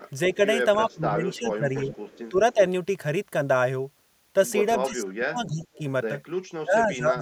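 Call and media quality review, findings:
Echo leak at 0.01–0.34 s, 0.87–2.2 s and 5.6–5.75 s: faint copy 301 ms behind the speech, about 25–35 dB down. It is likely residual echo from the far-end canceller. On a spectrogram it appears as a ghost of the harmonics shifted right.

Speech suppressed in double talk at 0.36–2.57 s, 4.88–5.81 s and 6.61–7.22 s: level dips of about 15, 35 and 25 dB, likely from the echo canceller ducking both talkers. Waveform shows envelope notches.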